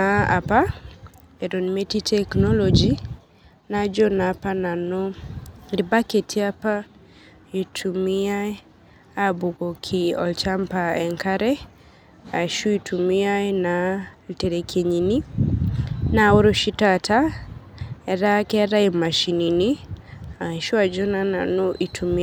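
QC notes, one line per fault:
No faults heard in this clip.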